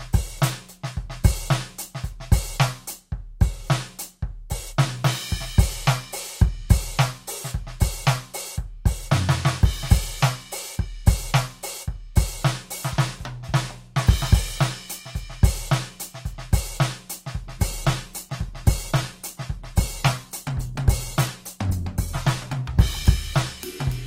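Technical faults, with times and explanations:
17.44 to 24.06 s, call bitrate drop: The music turns rough and muffled near the end of the clip. The call's bandwidth estimate fell, so the encoder was told to spend far fewer bits. It codes the music more coarsely and cuts away the high frequencies. The sound fits a fall from around 128 kbps to about 16 kbps. It stays at its worst for about 4.7 s and does not recover before the clip ends.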